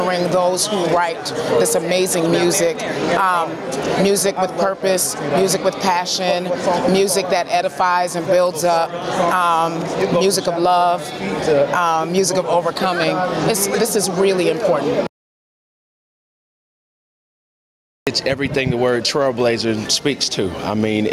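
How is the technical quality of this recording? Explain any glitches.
The recording is compromised by gain pumping running through the whole clip. The level swings by around 15 dB, and the dynamics sound squashed. The likely cause is input gain set far too high, with a fast limiter clamping down on each peak. Unlike a noise gate, which cuts the background to silence, pumping rides the level up and down.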